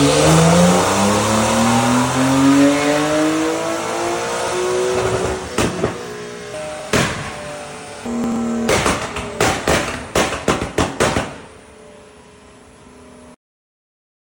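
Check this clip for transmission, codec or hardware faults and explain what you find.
Three short garbled moments at 4.40 to 4.52 s, 6.80 to 6.88 s and 8.24 to 8.36 s are chunks out of order. In each, a 40 ms block plays late, after the one or two blocks that should follow it, leaving hard joins.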